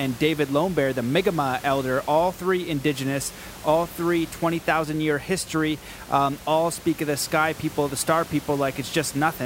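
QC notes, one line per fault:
No faults heard in this speech recording.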